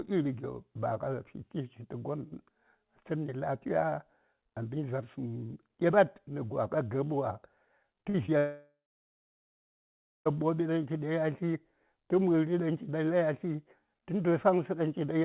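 Between 8.02 and 8.30 s, three bursts of short concealed packet loss occur at 8.02–8.06, 8.10–8.16 and 8.26–8.30 s. Each gap, lasting about 20 to 40 ms, is patched by extending the preceding sound, so it comes across as a brief smear or wobble. Real audio resumes within a fraction of a second, unlike a dropout.

From 8.38 to 10.27 s comes a long network dropout, likely caused by nearly 1.9 s of audio failing to arrive. The concealment buzz fades quickly, leaving about 1.5 s of silence. The sound then picks up later with that stretch missing, rather than smeared over. Throughout, nothing is heard above 4 kHz, which fits a narrowband G.711 call codec.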